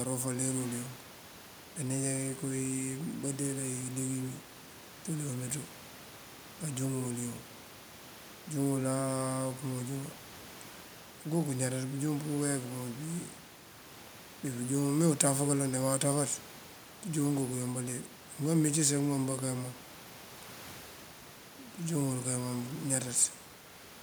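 Nothing goes wrong anywhere in this speech recording, and the only other thing you hear is the ordinary room noise sitting about 21 dB below the talking.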